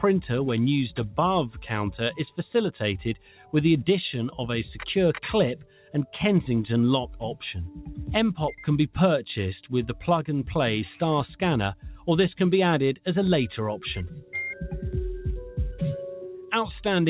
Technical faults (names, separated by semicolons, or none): noise suppressor applied to music or sounds; sound cut by the noise suppressor